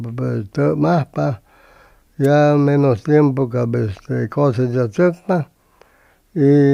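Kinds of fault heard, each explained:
Wireless microphone noise hit: a brief burst of static from 2.23 to 2.27 s, about 35 ms long, where the analogue FM radio link fades as reflected signals cancel, letting receiver noise rise before the signal recovers.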